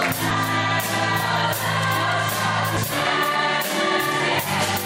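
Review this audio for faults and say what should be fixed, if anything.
At 2.77 s there is a momentary disruption from damaged data in a compressed stream. Corrupted bytes at that point prevented the decoder from reading the frame correctly, so it lost sync and searched for the next valid frame header before playback resumed. To prevent this, verify file or stream integrity with checksums and keep metadata such as stream titles out of the audio payload.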